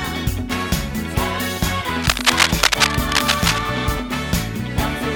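A worn cable, connector or control was likely being moved between 2.02 and 3.61 s, its contact resistance jumping about rapidly as it shifted. This cable scratch noise lays dense, irregular bursts of crackle over the audio for that stretch of roughly 1.6 seconds, heard as a scratching, rustling texture riding on top of the sound. The bursts sit at about the same level as the signal itself, so they compete directly with it.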